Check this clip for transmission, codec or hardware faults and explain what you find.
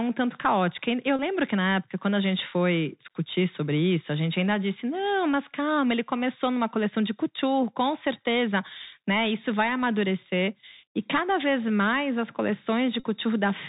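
Two faults here: narrowband Bluetooth headset coding throughout, plus two short packet-repeat dropouts.

The whole clip has that Bluetooth CVSD headset codec sound: nothing above 4 kHz, scratchy s sounds and grainy hiss, fitting a 64 kbps one-bit-per-sample stream with adaptive steps.

A Bluetooth headset packet repeated shows up at 1.17 to 1.20 s and again at 13.00 to 13.04 s. Lost packets got replayed, giving a brief buzz near 267 Hz; the gaps of about 26 ms and 38 ms point to roughly seven and ten packets.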